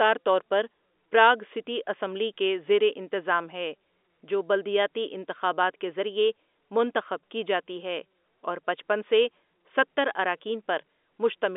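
Nothing is technically wrong with this speech recording, which comes over an ordinary G.711 telephone line that carries no sound above about 3.8 kHz.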